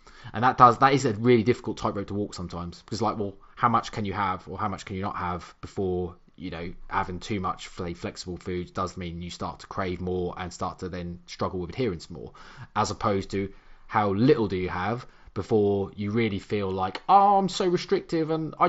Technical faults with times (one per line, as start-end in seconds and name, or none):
none